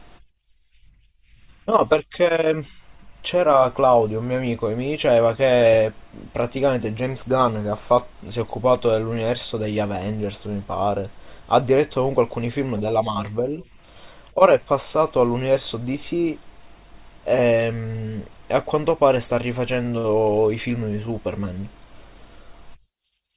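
No technical faults can be heard in this recording.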